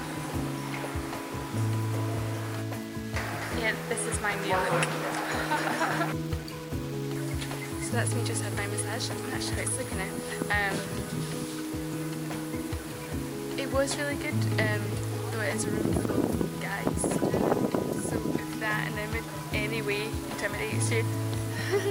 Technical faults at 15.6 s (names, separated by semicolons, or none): low bit depth without dither